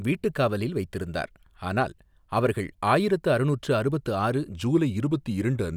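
From 4.53 s, right after "ஆயிரத்து அறுநூற்று அறுபத்து ஆறு", and continuing to the end, the speech has a wrong sample rate fault. Playback runs at 0.919 times normal speed and about 1.5 semitones low, which fits 48 kHz audio played at 44.1 kHz without conversion, so the voice drops and drags.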